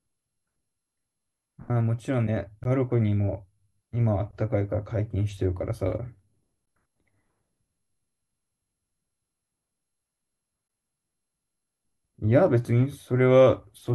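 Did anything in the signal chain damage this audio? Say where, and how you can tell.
Yes, at the codec stage: a gap at a join of encoded pieces, recurring every 4 s. The speech drops to silence for about 14 ms at 2.64 s, then about 23 ms at 6.65–6.68 s and 10.68–10.70 s, with smeared edges before it carries straight on. It looks like 4-second chunks encoded separately and butted together, so each one's start-up delay and last-frame padding remain as silence.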